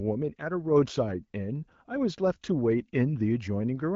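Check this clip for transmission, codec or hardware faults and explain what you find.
No faults found.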